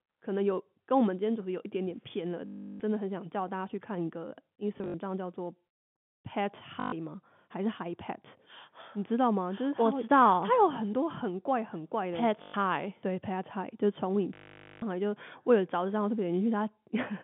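A telephone-band speech recording, limited to roughly 150 Hz to 3.5 kHz by the telephone line and carried in G.711 coding, has packet loss with the last packet repeated at 2.46–2.80 s, 4.78–4.94 s (scattered, longest run 60 ms), 6.80–6.92 s, 12.42–12.54 s and 14.34–14.82 s. Each gap is filled by replaying one short block, so the sound stutters robotically with a 50 Hz buzz, which fits 20 ms packets. A spectrogram shows frozen, vertically striped bands, and the waveform shows an identical repeating segment.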